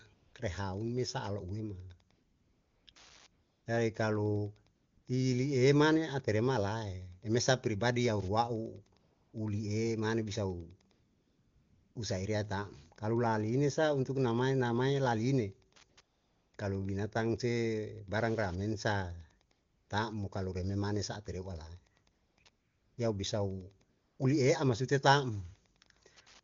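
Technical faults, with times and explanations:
Throughout, Wi-Fi interference: a faint, steady ticking about ten times a second, sitting roughly 35 dB under the talker. That rate matches a 102.4 ms Wi-Fi beacon from a nearby radio, which the audio circuitry rectifies into clicks.
0.13 to 24.19 s, AMR comfort noise: fifteen spots where the real background drops out and smooth synthetic hiss takes over, lasting from 20 ms up to just over a second (10.91 to 11.95 s). A tight cluster of three follows "namae namae laliene" at 15.73 to 16.53 s. Each time, the phone decided nobody was talking and stopped sending speech frames, so the receiver filled the gap with generated noise, audibly switching in and out.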